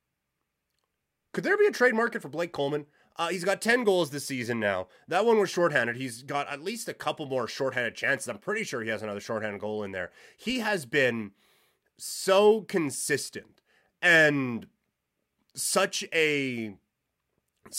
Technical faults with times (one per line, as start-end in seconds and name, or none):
none